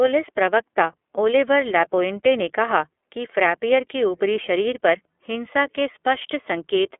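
Speech coded with the iLBC codec throughout: the spectrogram stops dead at 3.8 kHz, the texture is plainly rough and synthetic, and the codec runs in 30 ms frames.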